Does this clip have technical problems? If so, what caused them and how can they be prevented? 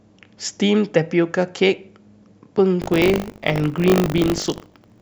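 Yes. Buffer tearing runs from 2.8 s to the end, a robotic 50 Hz buzz on the speech. The writer and reader of the playback ring buffer have slipped, so roughly a tenth of each period, which fits a 20 ms period, replays audio from around 70 ms earlier, with hard joins on both sides. Keeping the write pointer safely ahead of the read pointer, with enough headroom and proper underrun recovery, prevents this.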